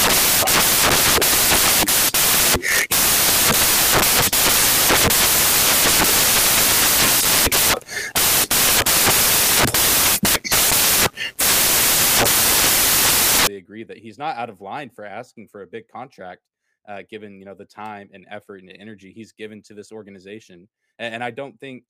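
From the very start until about 13.47 s, the speech comes with loud, harsh broadband noise: samples built from the wrong bytes. The bytes of each sample get assembled in the wrong order or alignment, so the jittery low bits end up dominating every value.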